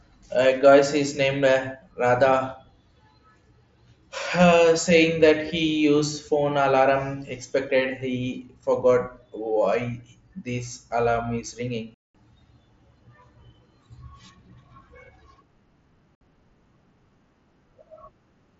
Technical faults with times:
11.94-12.15 unconcealed Bluetooth headset packet loss
16.15-16.21 unconcealed Bluetooth headset packet loss

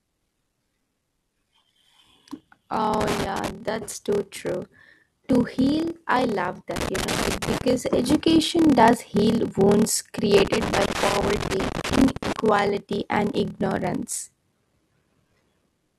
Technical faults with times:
0.00-15.98 block size mismatch (padded)
2.94-3.50 loose connector crackle
6.76-7.62 loose connector crackle
10.38-12.40 loose connector crackle

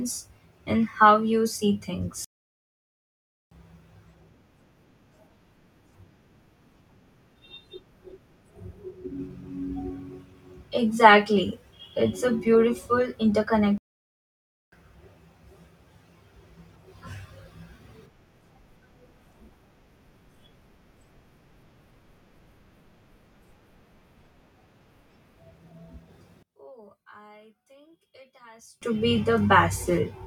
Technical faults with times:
2.24-3.51 playback stall
13.78-14.72 playback stall
26.43-28.82 one channel inverted

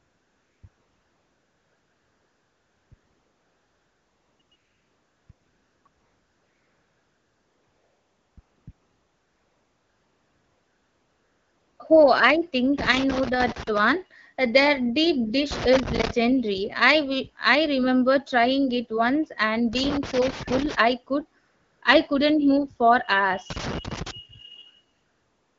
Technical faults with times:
0.00-11.79 AMR comfort noise
12.78-13.79 loose connector crackle
15.51-16.11 loose connector crackle
19.73-20.75 loose connector crackle
21.43-21.81 AMR comfort noise
23.50-24.11 loose connector crackle
24.93-25.58 AMR comfort noise

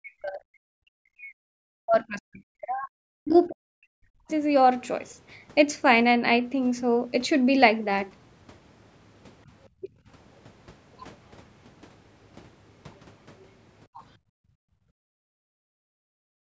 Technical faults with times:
0.00-4.30 speech suppressed in double talk
3.30-3.38 other side's voice leaking through
9.81-9.88 speech suppressed in double talk
12.96-13.00 other side's voice leaking through
13.87-16.46 background gated by the echo canceller

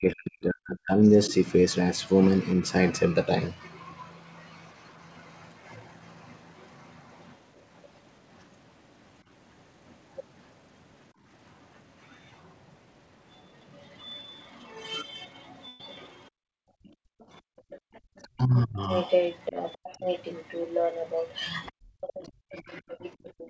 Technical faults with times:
0.00-1.31 speech suppressed in double talk
1.04-3.79 other side's voice leaking through
7.57-7.89 other side's voice leaking through
13.35-23.49 other side's voice leaking through
15.68-15.80 burst of packet loss
16.30-17.94 background gated by the echo canceller
18.23-18.89 speech suppressed in double talk
21.71-23.39 background gated by the echo canceller
22.22-23.03 speech suppressed in double talk

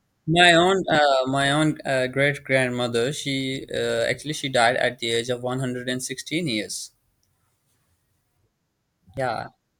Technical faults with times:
0.95 dropped buffer (overrun)
9.17 dropped buffer (overrun)

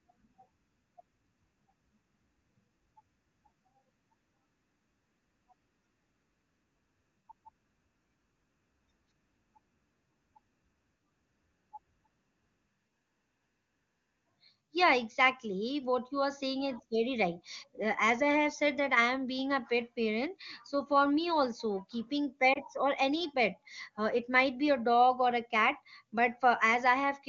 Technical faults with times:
22.53-22.58 lost AMR speech frames

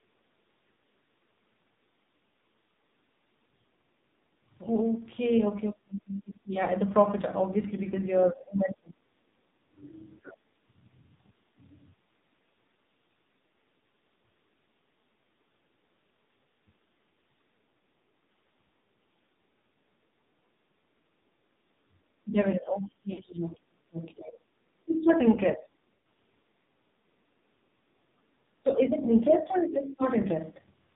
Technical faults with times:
0.00-30.95 AMR narrowband mobile codec
16.51 lost AMR speech frames
23.14-23.21 lost AMR speech frames
25.97-26.01 lost AMR speech frames

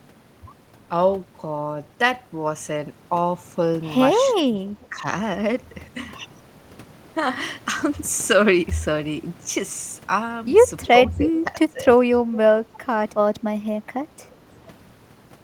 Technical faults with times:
4.33-5.05 speech suppressed in double talk
10.81-10.87 echo leak
10.89-12.57 speech suppressed in double talk
12.33-12.38 echo leak
13.23-13.30 speech suppressed in double talk
13.60-14.18 speech suppressed in double talk

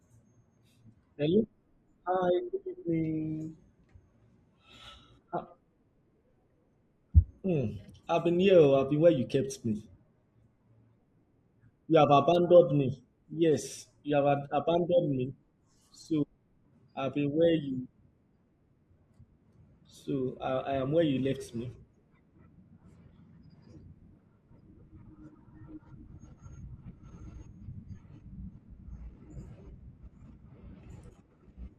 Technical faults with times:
8.64 dropped samples
9.65 dropped samples
12.35 dropped samples
13.73 DAB burbling

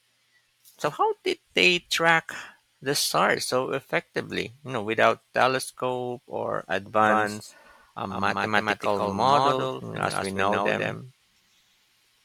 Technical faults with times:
7.00-12.25 doubled audio track

